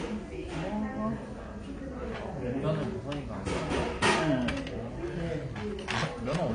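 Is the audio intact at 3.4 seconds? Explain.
No. At 3.4 seconds, as throughout the clip, the sound is dull and smeared, with a fizzy, warbling texture. Nothing is present above 9.8 kHz. The likely cause is AAC compression at a low bitrate, around 32 kbps, which lowers the cut-off and leaves spectral holes.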